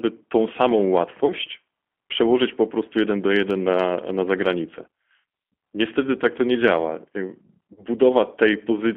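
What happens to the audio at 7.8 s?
At 7.74 s there is VoIP packet loss concealed by the speech codec, lasting until about 7.84 s. About 30 ms of speech is missing, which fits a single lost packet. The G.729 decoder fills the gap by repeating its last pitch and vocal tract filter while lowering the gain. The speech smears into a brief buzzy tone or coloured noise that fades. Because each frame builds on the previous one, the voice stays weak or distorted past the gap before recovering.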